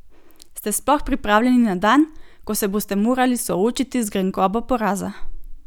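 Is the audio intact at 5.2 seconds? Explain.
Yes, at 5.2 seconds the speech plays through intact, with no dropout, glitch or other fault heard at that moment.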